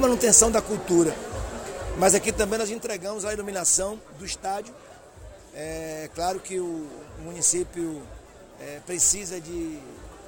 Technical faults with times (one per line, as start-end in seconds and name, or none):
2.26-3.04 zipper noise